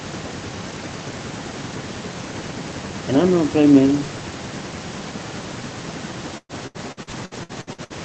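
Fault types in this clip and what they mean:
Repeated packet loss (robotic sound): Over 6.37 to 7.93 s, packets in the Opus call stream kept arriving late or not at all, nine gaps in quick succession, the longest 116 ms. The decoder bridged each hole by stretching out the last sound it had, so about 37% of that stretch is concealment rather than real audio. The speech turns choppy and machine-like, with pieces missing, against a band already cut off at 8 kHz.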